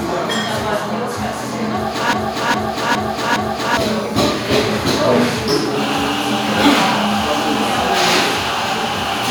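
From 2.13 s to 3.77 s, a broken-record loop: a 410 ms fragment repeats four times back to back, likely a stalled player resending its last buffer.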